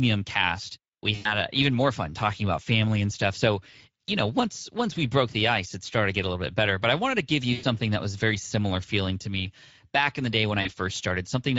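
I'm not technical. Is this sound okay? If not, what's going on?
No, it isn't quite right. The whole recording has gone through the Speex codec, an older speech compressor from internet calls and game chat. It squeezes the voice hard, so here it sounds plainly rough, grainy and a bit hoarse from start to finish.

There are also three brief glitches from VoIP packet loss concealed by the speech codec, at 1.15 to 1.36 s, 7.53 to 7.65 s and 10.61 to 10.69 s. Bits of the call went missing, and the decoder covered the holes by guessing, which gives short buzzy or smeared patches that fade out.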